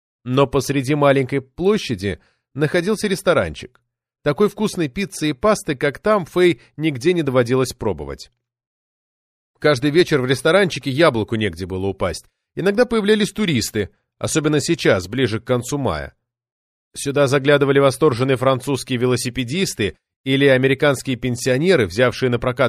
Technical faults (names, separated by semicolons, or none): none